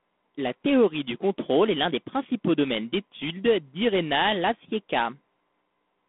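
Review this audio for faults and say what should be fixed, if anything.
G.726 ADPCM runs throughout. Coarse prediction-error coding, fitting 24 kbit/s, leaves a rasping hiss that tracks the speech. Nothing passes above 3.8 kHz. To prevent it, capture over a wideband path, or run ADPCM at 32 kbit/s or higher.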